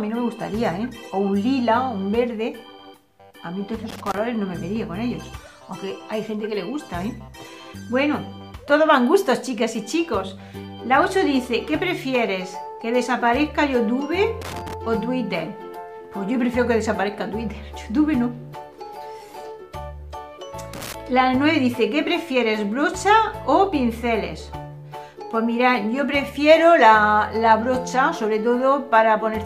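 A worn or dirty contact in the signal chain is making and breaking, so the audio is chopped, which is loose connector crackle. Irregular bursts of scratchy crackle appear at 3.89 to 4.18 s, 14.42 to 14.74 s and 20.74 to 20.94 s.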